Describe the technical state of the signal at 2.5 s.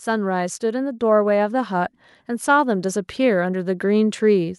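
At 2.5 s the speech is in the middle of an automatic gain rising. It runs from 0.05 s to 4.1 s. The gain control judged the input too quiet and kept turning its gain up slowly. Over that span the level climbs by about 8 dB. At 2.5 s the rise is still underway. The voice and the background noise swell together, so the whole sound grows louder rather than just the speaker.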